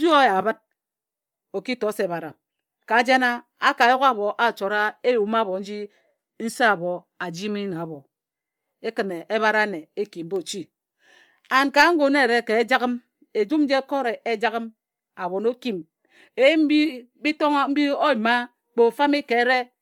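From start to finish the speech carries a breathy, grainy edge, with the top end sounding hissy and smeared. This is likely Bluetooth LC3 compression: upper-spectrum detail is discarded and replaced with noise fill, consistent with about 48 kbps and 10 ms frames.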